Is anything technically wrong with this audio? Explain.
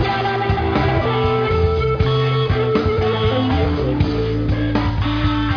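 No, nothing is technically wrong with this audio.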